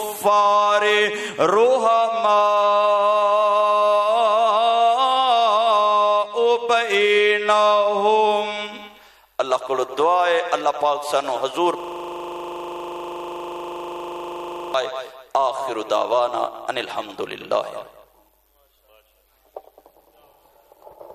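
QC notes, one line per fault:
11.80 to 14.74 s, system hang loop. A single 40 ms slice of audio repeats exactly, 73 times in a row, for nearly three seconds. The sound stops moving forward and turns into a rapid, mechanical stutter at 25 Hz, close to a low buzz. The system froze while the sound hardware kept replaying the same ring buffer. The loop length points to a buffer holding 40 ms of audio.
15.82 s, compressed frames skipped. The audio jumps forward by about 20 ms, where compressed audio is missing. It was either absent from the stream or rejected by the decoder as damaged.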